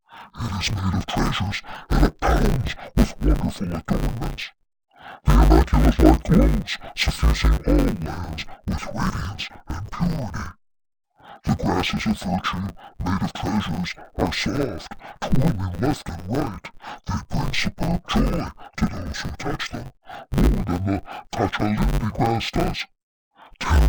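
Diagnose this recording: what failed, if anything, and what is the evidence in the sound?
The speech has been sent through as interleaved audio read as planar, so the fault sits at the sample-format conversion stage. It runs for the whole recording: the voice sounds dull and robotic, with a steady buzz at 100 Hz and no obvious drop in pitch. Each 10 ms block of alternating left/right samples gets split in half, and each half plays at half speed. Blocks that short chop the sound at the block rate instead of giving you a clean octave-down effect.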